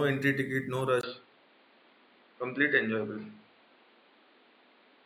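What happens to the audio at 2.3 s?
The recording has likely been switched to a poorer input device, from 1.01 s to the end, just after "entry ticket no". After a 20 ms gap, the sound turns dull and boxy with nothing above 4.8 kHz, and a faint new background noise sits about 35 dB below the speech.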